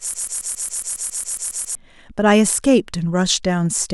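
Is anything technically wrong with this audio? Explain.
Yes. A broken-record loop runs from the start to 1.75 s: a 0.14 s fragment repeats twelve times, likely from a stalled player or stream resending its last buffer.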